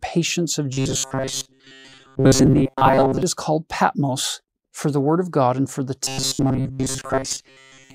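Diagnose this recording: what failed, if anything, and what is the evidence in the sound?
Robotic sound from repeated short buffers, a buffer or driver-stage failure, appears from 0.73 to 3.23 s and from 6.05 s to the end. The sound turns into a rigid, metallic buzz at a fixed 133 Hz, which fits a repeated chunk about 7.5 ms long. The likely cause is audio arriving too seldom, with most of the real signal skipped and the last fragment looped in its place. Codec artefacts warble and smear, but this buzz keeps one constant pitch.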